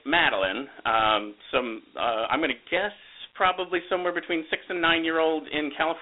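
From start to finish the speech carries Dialogic VOX ADPCM damage. The band sits roughly 300 Hz to 3.7 kHz, with nothing above 3.9 kHz, which fits 4-bit ADPCM at 8,000 samples a second. Its coarse steps leave a plainly audible gritty hiss riding on the speech.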